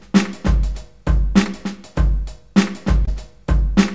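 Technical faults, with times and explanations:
1.44–1.47 s and 3.05–3.09 s, short concealed packet loss: about 20 ms of audio, which fits one lost packet, never arrived. The receiver extended the preceding sound for 14 ms and 18 ms, then blended back, so each spot is a brief smear or wobble rather than the silent gap of a dropout.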